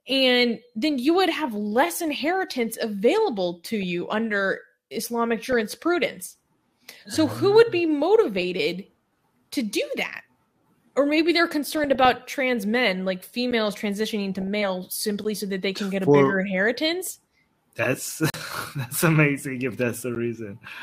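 DAB burbling comes first, at 3.83 s, then 5.44–5.6 s, 8.37–8.58 s and 11.72–12.13 s: bit errors, a few tenths of a percent, slipped past error correction and corrupted the MP2 audio data, so single sub-bands blip or jump in level. A spectrogram shows isolated bright rectangular band patches.

A block of digital silence at 13.51 s drops the audio out, probably from an unfilled output buffer, giving a tick from the hard edges. On the waveform it's a flat-line gap between vertical steps.

Burbling returns at 14.34–14.47 s, a little denser. Then come further silent blocks at 15.24 s, 18.30–18.34 s (40 ms, a short hole) and 20.15 s, each 10 ms apart from the longer one.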